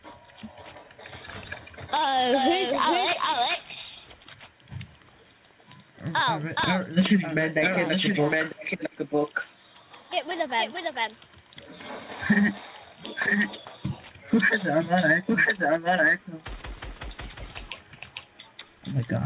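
Nothing goes wrong in this one; the sound simply carries the narrow, phone-like character of a call path, with nothing above 4 kHz, which fits a G.711 mu-law connection at around 64 kbps.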